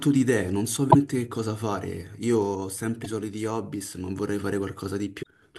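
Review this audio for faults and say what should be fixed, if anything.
The speech carries a steady buzz at 46.9 Hz throughout, the signature of a block size mismatch (truncated). One stage writes longer blocks than the next reads, so the tail of each block is discarded and the splice points repeat at the block rate. The buzz frequency fits 1024-sample blocks at 48 kHz. So little is dropped per block that playback runs at essentially normal speed, and the buzz is the main symptom. To prevent it, match the write and read block sizes between the two stages, or buffer the excess instead of discarding it.

Three short glitches come from damaged data in a compressed stream, at 0.88 to 0.95 s, 3.01 to 3.06 s and 5.19 to 5.27 s. Each lasts about 50 to 75 ms and is heard as a brief blip breaking into the speech. Corrupted bytes make the decoder misread or reject the affected frames. It then loses sync and skips forward until it finds the next valid frame header, which produces the glitch. 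To prevent it, protect the stream with checksums or error correction and keep foreign data such as metadata out of the audio frames.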